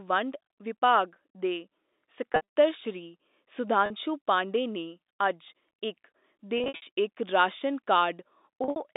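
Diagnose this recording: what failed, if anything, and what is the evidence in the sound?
Packet loss with pitch repetition at the network stage, at 2.32–2.41 s, 3.86–3.90 s (just before "ਪਾਂਡੇ ਨੇ ਅੱਜ ਇਕ"), 6.58–6.82 s and 8.64–8.76 s. The short gap at 3.86 s sounds briefly held and buzzy because the receiver repeated the last pitch period across the missing audio, while the longer runs fade into silence before the speech cross-fades back. The longest unbroken run is 60 ms.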